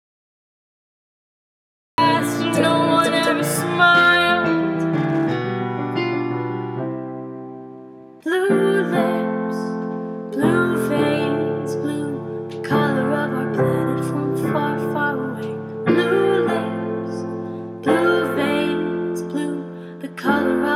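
The recording began late, producing a cut-off start: digital silence runs to 1.98 s, then the audio enters abruptly mid-sound with no natural attack or fade-in.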